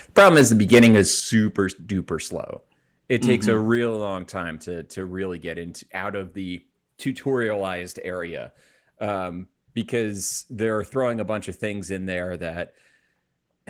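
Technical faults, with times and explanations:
0.17–1.0 s, microphone overload: The opening stretch of speech has a harsh, crackling, fuzzy edge on the loudest syllables, as if the sound were being squeezed flat at its peaks. The likely cause is input volume set too high, driving the signal about 9 dB past the converter's ceiling so that the tops of the waveform are sliced off. Around a tenth of the samples sit pinned at the limit, and those squared-off peaks add the gritty distortion.
0.19 s, 1.2 s and 3.75 s, microphone volume stepped down: Three times the speech and the background behind it suddenly drop in level together, with no fade. The first drop is about 3 dB, inside the distorted opening. The second, about 8 dB, comes just before "duper slow". The third, about 4 dB, comes just before "long time to to". This is likely the call software reacting to the overloaded, clipping input by cutting the device's microphone gain in one abrupt step each time.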